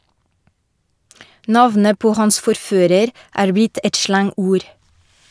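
No technical faults can be heard anywhere in this speech recording.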